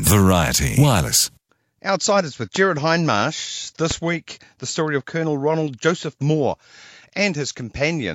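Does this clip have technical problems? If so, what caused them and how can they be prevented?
Yes. Two loud pops sit on the speech at 2.56–2.58 s and at 3.91–3.93 s, just before "week the story of", each a single sharp click roughly 10 dB above the speech. The likely cause is a voltage spike from a plug, a switch or static. On a waveform each pop is a narrow spike, and on a spectrogram it is a thin vertical broadband line. Secure connections and avoid switching or touching equipment while recording.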